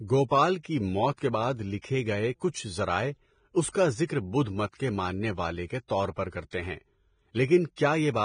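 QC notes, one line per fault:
Throughout: Vorbis compression, likely the cause of the heavy codec damage heard across the speech. Nothing survives above 9.7 kHz, and the treble beneath that edge is hissy and grainy, with roughened tones and blurred consonant attacks, which points to a low bitrate near 23 kbps. Unlike a plain low-pass filter, the upper band carries noise-like grain in place of detail.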